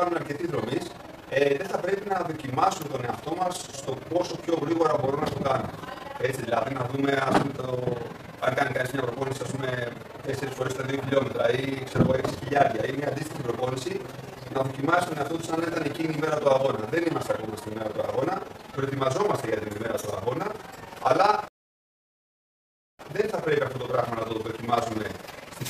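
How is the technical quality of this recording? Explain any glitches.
The recording has two technical faults: a continuous fluttering of level across the whole clip, and one break in playback near the end.

Throughout the clip the loudness pulses rapidly, around 20 times a second, giving the audio a rough, fluttering tremolo. The level swings by about 11 dB on each pulse. This is overlap-add ripple. The audio was split into windowed frames and rejoined with an overlap that does not add back to a steady gain, so the level rises and dips once per frame.

From 21.48 s to 22.99 s the sound drops to silence, then picks up exactly where it left off, with nothing missing. This is a rebuffering stall. The player used up the audio it had downloaded and paused until more data arrived. The gap inserts about 1.5 s of extra time into the clip, but none of the original audio is lost.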